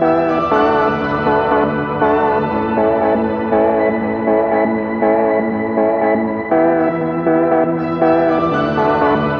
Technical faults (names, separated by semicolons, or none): none